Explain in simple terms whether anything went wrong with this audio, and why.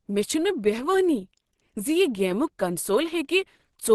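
The speech sounds muffled and hoarse from start to finish, with plainly audible damage. Nothing is heard above about 12.1 kHz. The likely cause is Opus compression at a low setting, where the encoder switches to a speech mode that trims detail to save space.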